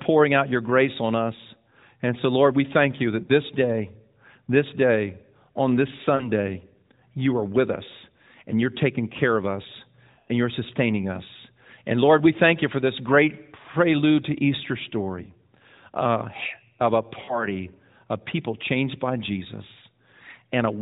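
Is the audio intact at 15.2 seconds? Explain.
No. A lost AMR speech frame hits at 15.24 to 15.28 s. The length points to a single 20 ms frame that failed its checksum after a radio error. The decoder had nothing valid to play. It rebuilt the gap from the last good pitch and vocal tract settings at reduced gain. The result is a brief dip or warble before the speech picks up again. The narrowband AMR codec carrying the call stops everything above 4 kHz.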